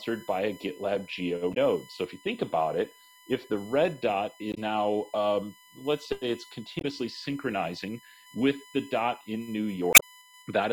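A steady, fixed-pitch whine runs under the whole clip, built on 1 kHz with its strongest component at 2 kHz, about 25 dB below the sound. This is USB whine: current drawn in 1 ms bus frames leaks through power or ground into the audio path.

Brief glitches break in at 1.50 to 1.57 s, 4.51 to 4.58 s and 6.78 to 6.85 s, with a longer one at 9.92 to 10.03 s. These come from damaged data in a compressed stream: corrupted bytes make the decoder misread frames and lose sync until it finds the next valid header.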